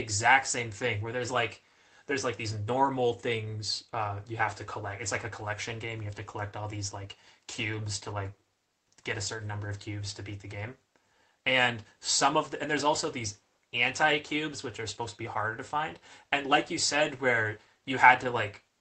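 No technical faults are audible anywhere here.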